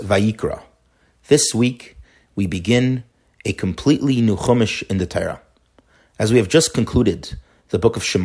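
No technical faults can be heard anywhere in this speech recording. Nothing interrupts or alters the sound at any point.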